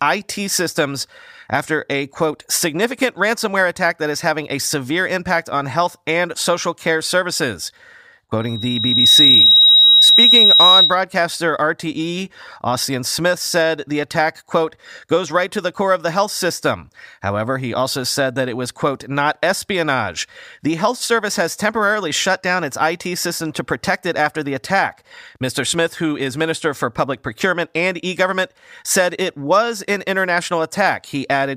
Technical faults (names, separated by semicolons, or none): loudspeaker feedback squeal